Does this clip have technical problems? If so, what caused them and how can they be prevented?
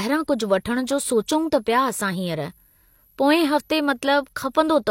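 Yes. A switching supply whistle runs through the whole speech clip: a thin, high tone that wanders between about 11.3 and 11.5 kHz, sitting roughly 40 dB under the speech. It comes from a switch-mode power supply that drops into an audible burst mode at light load, and its pitch slides as the load shifts. Powering the recorder or preamp from a linear supply or a battery, or moving the supply well away from the mic chain, should keep it out.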